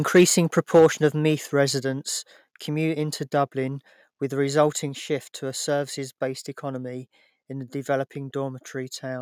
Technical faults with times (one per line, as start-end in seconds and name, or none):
0.15-0.24 microphone overload
0.58-1.06 microphone overload
0.79 microphone volume stepped down